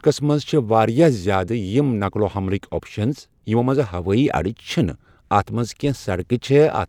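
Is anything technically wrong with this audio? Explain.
No, nothing technically wrong stood out on listening to this speech recording.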